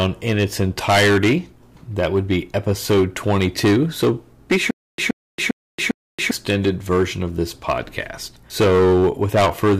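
A speech clip with two problems. The first runs the whole way through: hard clipping. The level is driven about 18 dB past what the chain can pass, so something like a tenth of the samples hit the ceiling and get sliced flat. Those squared-off tops throw harmonics high up the spectrum, and at this much overload you hear a harsh fuzz on every loud syllable rather than the occasional crackle. The second is a stutter with silent gaps from 4.71 s to 6.31 s. A 124 ms fragment plays, then about 277 ms of dead digital silence, and the cycle repeats every 401 ms, four times over. The likely cause is a player or stream stalling, replaying its last buffered chunk on each retry and then running dry. Whatever should have played in that stretch is lost.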